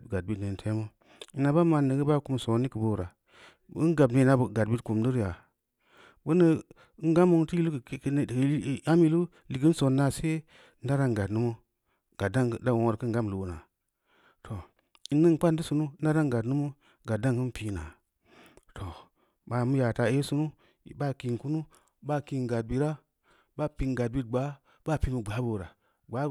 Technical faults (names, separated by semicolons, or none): none